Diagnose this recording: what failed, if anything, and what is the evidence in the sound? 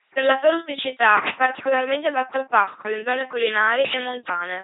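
Buzzy, robotic speech throughout, with nothing above 3.9 kHz: heavy LPC-10 vocoder damage at the codec stage, consistent with 2.4 kbit/s pulse-or-noise resynthesis.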